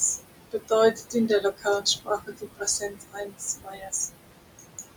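Noise suppressor artifacts run through the whole clip: the suppressor pulls the room noise, which sits about 10 dB below the speech, down by about 21 dB in the gaps and lets it back up under the speech.

Speech cut by the noise suppressor comes in two stretches. From 0.51 to 0.72 s the suppressor mistakes parts of the speech for noise and turns them down by up to about 19 dB. From 0.93 to 3.93 s it does the same by up to about 21 dB, across roughly half of that span, leaving soft sounds and word endings swallowed and faint.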